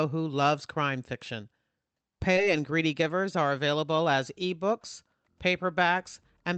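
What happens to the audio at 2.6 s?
A jitter buffer speed-up, 2.47 to 4.14 s: pitch-period slices are cut to drain buffered delay, so speech runs 11% faster, hurried but same pitch.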